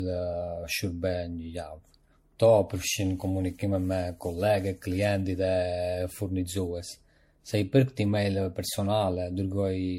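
Repeated lossy re-encoding, likely around seven passes through an MP3 chain consistent with 64 kbit/s, gives generation loss across the whole speech clip: the sound is swirly, smeared and hollow, with blurred attacks.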